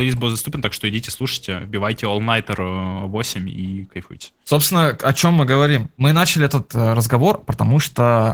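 The clip is speech, and Opus voice compression damage runs through the whole of it. The damage is plainly audible. The voice sounds hoarse and slightly robotic, because the excitation is coded coarsely. The top of the band is still present, so the sound is fullband rather than narrowed. That points to hybrid mode, with linear prediction below 8 kHz and a transform layer above. The roughness fits a low bitrate around 16 kbps.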